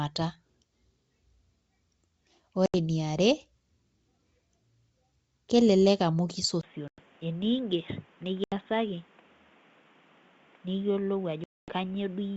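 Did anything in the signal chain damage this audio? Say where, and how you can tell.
Yes. Four hard-edged holes sit at 2.66 to 2.75 s, 6.88 to 7.01 s, 8.44 to 8.54 s and 11.44 to 11.74 s, dropping out about 80, 100, 80 and 240 ms of sound. Each gap ends with a brief spell of slight distortion before things settle. That is packet loss on an ADPCM call, a network fault. Lost packets become silence, and the decoder's adaptive predictor and step size drift out of step with the sender's until they reconverge.

At 6.61 s the sound suddenly turns dull and boxy after a short silence of about 20 ms, and stays that way to the end. Before that point the wideband G.722 path carries sound clearly up to 7 kHz. After the switch nothing remains above 3.8 kHz, the level falls by about 5 dB, and a new noise floor appears about 30 dB below the signal. The likely cause is an input switched to a poorer device at the driver level, such as a headset dropping into its narrowband call profile.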